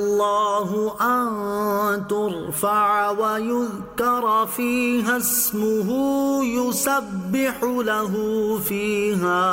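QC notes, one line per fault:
No faults found. Nothing here needs a QC entry.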